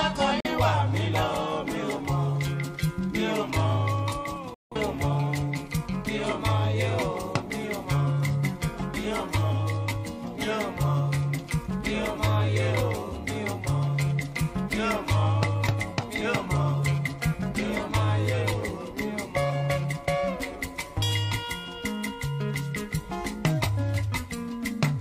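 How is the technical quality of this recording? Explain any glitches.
The recording has two digital broadcast dropouts. From 0.40 to 0.47 s, and again from 4.54 to 4.76 s, the receiver stopped getting valid frames and muted, with a 3 ms fade. The sound cuts sharply to silence, and the first hole fits one lost frame, the second about four. The missing audio does not return.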